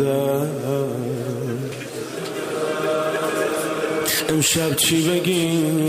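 At 1.72 s and again at 3.16 s the sound lurches forward, with no gap of silence, as if a short stretch of about 40 ms had been cut out and the two sides butted together. Both jumps are likely dropped buffers (overrun): the recording software fell behind, the hardware wrote new samples over a block it had not yet collected, and that block was lost.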